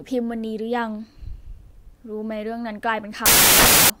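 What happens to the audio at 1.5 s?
Nothing goes wrong at 1.5 s: the speech carries on intact through that moment, with no dropout, click or distortion to be heard.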